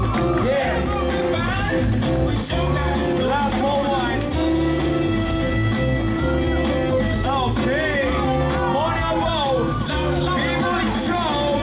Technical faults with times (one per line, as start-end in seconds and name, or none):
none